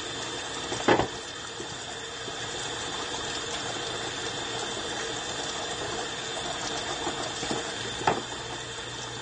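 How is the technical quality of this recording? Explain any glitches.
The quality is limited by plainly audible compression damage across the whole clip. AAC compression, throughout: nothing is present above 9 kHz, and the remaining sound is dull and smeared, likely from AAC-LC coding at a starved bitrate, consistent with around 32 kbps.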